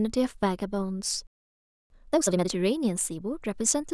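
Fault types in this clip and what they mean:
Playback stall: At 1.27 s the speech just stops dead, mid-flow, and you get silence for about 0.63 s until 1.90 s. It's not a pause in the talking; the sound is cut off and then picks up again. The likely cause is the player running dry of data or its output thread getting blocked for a moment, so nothing reached the output until it recovered.
Time-compressed catch-up: Right after the gap, from 1.90 s to 2.52 s, the speech comes out rushed at about twice normal speed but without any chipmunk pitch shift. That's the player clawing back the backlog from the stall by snipping out small chunks and cross-fading the joins.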